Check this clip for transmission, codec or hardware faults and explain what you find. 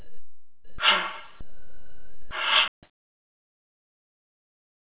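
Two kinds of fault are present, heard through a narrowband call path whose bandwidth stops at 4 kHz, which points to G.711 at 64 kbps.

Sound dropped by the voice detector, 0 to 0.78 s and 1.41 to 2.31 s: the audio gives way to steady, featureless noise, likely because the sender's voice detector judged the input as background and stopped transmitting, so the receiver filled the gaps with comfort noise.

Audio dropout to silence, from 2.68 s to the end: the sound cuts off into silence with no room tone, likely because the input was lost while recording or encoding continued writing silence. Anything after that point is gone.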